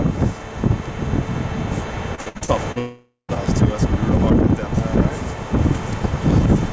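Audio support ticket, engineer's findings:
Repeated packet loss (robotic sound), 2.15–2.78 s: choppy texture with pieces missing. Six short gaps, longest 58 ms, each patched by extending the preceding sound. Concealment covers about 39% of the span. Jitter buffer or receiver PLC is filling repeated late or lost packets back to back.

Long network dropout, 2.78–3.32 s: concealment buzz fading into roughly 150 ms of silence, then the audio resumes with about half a second of material missing. Likely cause is a network outage. No packets arrived, so the receiver extrapolated the last frame, then muted.

Call path: band-limited, nothing above 8 kHz, consistent with G.722 at 64 kbps.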